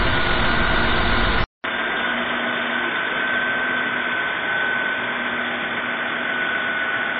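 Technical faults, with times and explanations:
Throughout, MP3 compression: the sound has a watery, swirling texture, with a metallic chirp on bright, noisy parts and softened attacks, and nothing reaches above about 5.7 kHz. The likely cause is heavy MP3 encoding at a low bitrate, which fits around 24 kbps. With so few bits, the encoder cuts the treble at a fixed point and drops weak frequency components, which flicker on and off from frame to frame.
1.44 s to the end, input switched to a poorer device: after a 200 ms gap the sound turns duller and boxier, drops a few decibels in level, and brings in a faint new background noise well below the main sound. The top of the band now stops at about 3.6 kHz. This points to the recording likely moving mid-stream onto a narrower, lower-quality input, such as another microphone or a headset's call mode, with its own tone and noise.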